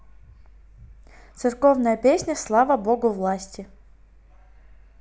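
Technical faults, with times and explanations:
No technical faults detected.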